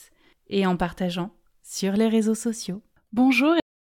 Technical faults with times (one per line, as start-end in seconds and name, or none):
3.60-3.95 cut-off end